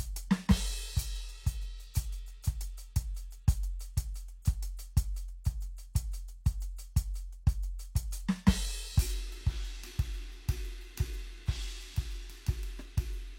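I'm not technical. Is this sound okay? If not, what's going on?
No. At about 4.42 s, just before a sharp hit in the music, there is a brief hiss lasting around 31 ms, and the hit itself sounds softened. This is pre-echo: the compression spread its noise across a short chunk, leaking into the quiet moment before the attack.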